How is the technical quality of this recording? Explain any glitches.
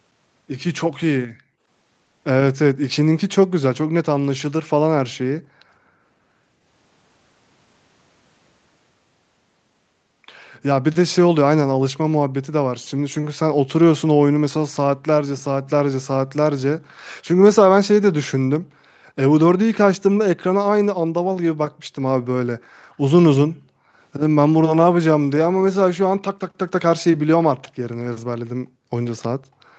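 The recording is marred by repeated background dropouts from an overactive echo canceller and one faint echo near the end. The sound tops out around 8 kHz, typical of a call codec path.

Background gated by the echo canceller: at 1.54–1.61, 5.39–6.15, 18.59–18.77, 23.54–24.01, 28.47–28.92 and 29.37–29.70 s, the canceller clamped the microphone while the far-end loudspeaker played. Room sound sinks by about 40 dB, or about 19 dB in the first, briefest dip, then returns.

Echo leak: at 29.17–29.22 s, residual loudspeaker pickup, likely slipping past the echo canceller, returns as a delayed copy about 257 ms late. It is very faint, about 35 dB below the speech.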